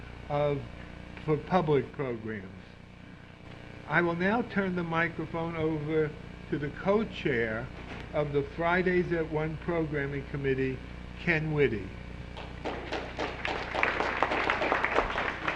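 A gain change was likely applied to the digital signal without a ramp, stepping the level down by about 4 dB from one sample to the next at 1.90 s and back up at 3.45 s, so the sound and its background noise drop and recover together in a sudden gain jump.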